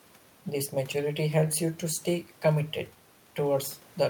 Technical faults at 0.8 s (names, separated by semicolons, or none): none